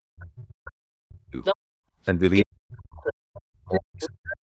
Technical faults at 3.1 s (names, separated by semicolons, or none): speech suppressed in double talk; other side's voice leaking through